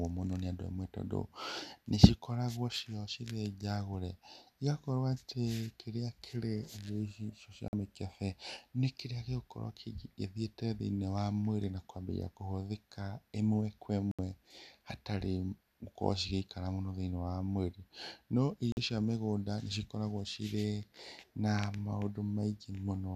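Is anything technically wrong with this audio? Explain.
Yes. Three digital broadcast dropouts occur, at 7.68–7.74 s (just before "mikebe nĩ kĩrĩa gĩgũkorwo"), 14.11–14.19 s (just after "kũambia kũhũthĩka ĩmwe kwa") and 18.72–18.78 s (just before "cia mĩgũnda nĩ cikoragwo"). The receiver muted on corrupted frames, cutting the speech to silence for about 48, 72 and 48 ms, which fits two or three lost frames each time.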